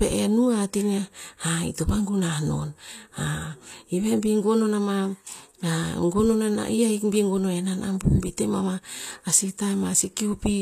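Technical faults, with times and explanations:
Throughout: likely HE-AAC compression. The treble is bright but synthetic, and s sounds are gritty and metallic because the upper bands are copied from lower ones rather than coded, which fits a low bitrate near 24 kbps. A spectrogram shows smeared, repeated high-band texture and nothing above 14.9 kHz.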